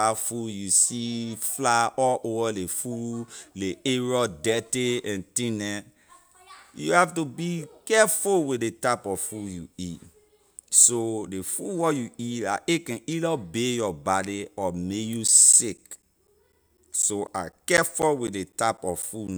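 A speech recording that, from 15.28 s to 19.28 s, develops a regular train of ticks every 0.25 s, about fifteen in all. These are periodic USB or driver dropouts: something blocks the USB bus or audio driver on a fixed schedule, and each time roughly 10 ms of audio is lost and replaced with silence. The gaps cut into the signal as short clicks, evenly spaced four times per second.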